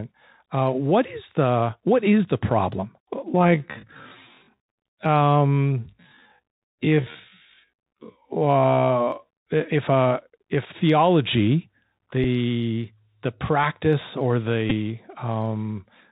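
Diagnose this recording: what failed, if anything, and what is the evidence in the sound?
The codec stage is at fault for the whole clip: the speech passed through a Bluetooth CVSD headset codec, a one-bit delta modulator consistent with the 64 kbps link. Nothing above 4 kHz survives. Loud high sounds outrun the adaptive step, s sounds turn scratchy, and a granular hiss sits under the speech.

From 3.22 to 9.28 s the pace abruptly drops to about 0.56 of normal speed while the pitch holds steady. The likely cause is a software time-stretch that repeats short pieces to fill a longer duration.

The wireless link between headset and phone dropped out at 14.70 to 14.73 s, a gap of about 11.2 ms, which fits three lost voice packets. The chip replayed the last packet's bits every 3.75 ms, leaving a brief buzz near 267 Hz before good packets resumed.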